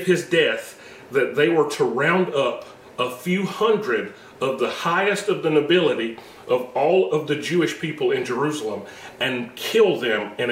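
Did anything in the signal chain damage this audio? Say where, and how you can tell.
No, nothing along the chain seems to have harmed this one, so there's no stage to single out here.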